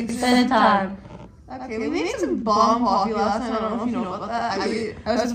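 From the very start there's a channel delay doubling: one side runs about 93 ms behind the other, which fits a 4096-sample buffer. Folded down to mono, that late copy sits right at full level, so everything has a distinct slapback or doubled edge the whole way through.

Then from 2.35 to 4.72 s you get a Bluetooth SBC bit pool drop. The link got congested and the encoder cut its bit budget hard, roughly consistent with the bit pool dropping from 31 to 14, or around 99 kbps. The top bands starve, so the treble goes dull and a gritty, grainy noise creeps in until the rate recovers at 4.72 s.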